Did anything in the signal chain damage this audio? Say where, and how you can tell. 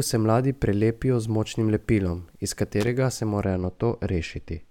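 Yes. In the analogue wiring, a loose connector crackle hits from 2.81 to 2.87 s, right after "z močnim lepilom iz". For about 70 ms a worn or dirty contact keeps making and breaking, so the signal is chopped into a scratchy, irregular burst, with pops wherever DC sits on the line. On a waveform this shows as a ragged cluster of sharp spikes and dropouts. On a spectrogram it appears as broadband vertical streaks at uneven spacing.

From 3.43 s to the end, de-emphasis applied wrongly dulls the speech. A treble cut meant to reverse pre-emphasis was applied where none existed, or applied a second time, somewhere in the processing before storage or playback. It leaves a smooth downward slope, about 11 dB lower at 10 kHz than at 1 kHz, so the sound turns muffled. A spectrogram shows the upper bands fading gradually from that point onward, with no sharp cutoff edge.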